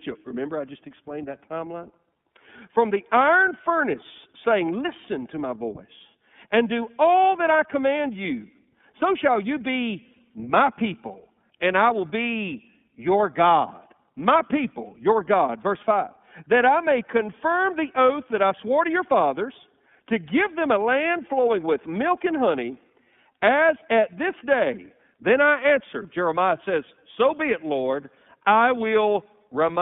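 Throughout the speech, the sound is thin and boxed into a telephone band of 150 Hz to 3.5 kHz, with a plainly audible rough, synthetic edge. That is the iLBC codec, coding each 30 ms frame's excitation independently, which fits a rate near 13.3 kbps.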